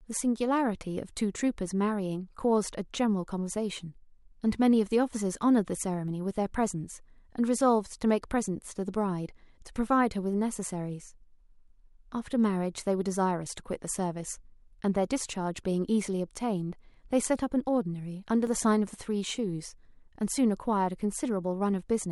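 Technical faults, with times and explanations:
6.08 s and 18.47 s, dropped buffer (overrun): two spots where the speech jumps forward with no gap, losing roughly 30 ms at the first and about 10 ms at the second. That's likely the capture side missing a buffer before the hardware overwrote it, so the edges butt together.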